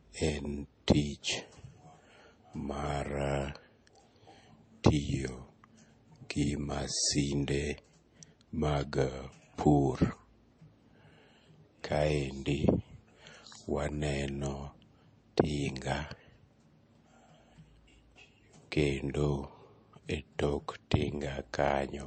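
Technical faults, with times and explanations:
Throughout: low-bitrate audio saved at a high bitrate. The speech carries the smeared, swirly sound of a heavy MP3 encode near 34 kbit/s, though the file is stored around 256 kbit/s. The likely cause is re-encoding, which cannot restore what the first pass discarded.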